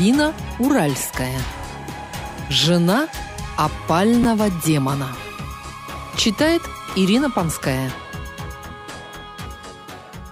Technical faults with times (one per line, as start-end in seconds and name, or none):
4.23 chunks out of order